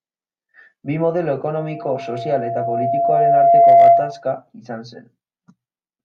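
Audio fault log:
1.57–4.24 s, loudspeaker feedback squeal: the microphone picked up its own loudspeaker, and at 684 Hz the loop gain went past one. That single tone swells over about two seconds into a squeal roughly 15 dB above the speech, then stops.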